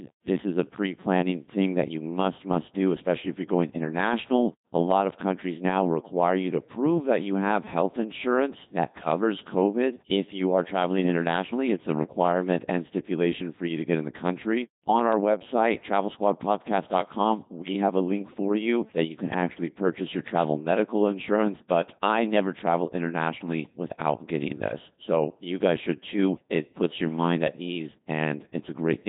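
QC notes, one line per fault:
Throughout, Codec 2 vocoder: heavily damaged speech, robotic and buzzy, since a codec at about 2.4 kbit/s resynthesises the voice from pitch and envelope alone.
17.59 to 17.74 s, bit errors on digital voice radio: just before "have a link for", flipped bits corrupt several frames, so pitch, level and tone jump into warbling gibberish.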